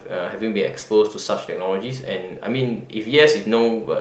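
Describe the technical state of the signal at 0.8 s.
At 0.8 s the speech is inside a short stall from a late packet, running from 0.79 to 0.84 s. A packet arrived after its playout time, the jitter buffer emptied, and the receiver stretched the preceding sound by about 20 ms before resuming exactly where it left off. Nothing is lost, but a sound is held slightly too long, with a faint buzz or dip. On a spectrogram, already capped near 8 kHz by the call codec, the harmonics run flat and smeared for that stretch; the waveform shows a repeated cycle pattern.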